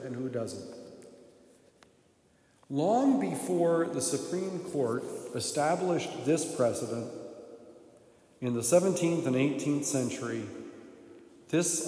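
No technical faults can be heard anywhere in the audio.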